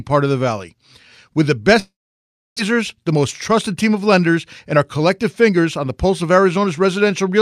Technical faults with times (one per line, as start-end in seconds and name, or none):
1.79-2.60 long network dropout
4.65-6.97 jitter buffer speed-up